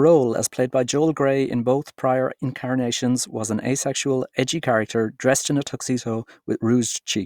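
There are no technical faults to describe in the speech.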